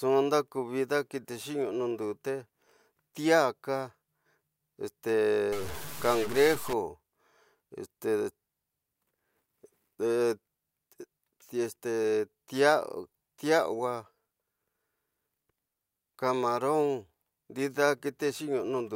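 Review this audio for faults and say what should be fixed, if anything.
From 5.52 to 6.73 s the speech turns harsh and buzzy. Pauses in that stretch fill with a gritty noise. This is likely a stuck bit. One bit of each sample is held at a fixed value. Roughly half the samples then land off by a step of about -35 dBFS. The error tracks the waveform, which gives the buzz. It also flips near zero, so silences get noisy. Replace or re-record that section. To prevent it, test the converter and its data lines before recording.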